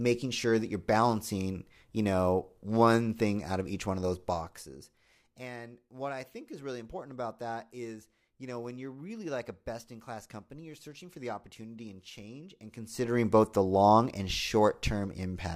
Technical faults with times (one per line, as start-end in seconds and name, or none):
none